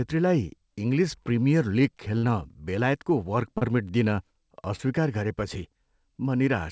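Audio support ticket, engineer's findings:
Burst of packet loss, 2.18–2.24 s: about 50 ms of consecutive packets lost in the jitter buffer; the receiver extends and fades the last sound, then skips ahead.

Short concealed packet loss, 3.58–3.62 s and 4.76–4.80 s: roughly 30 ms never reached the decoder in time; concealment bridges each hole, leaving a short smear or wobble through the G.722 band, which stops at 8 kHz.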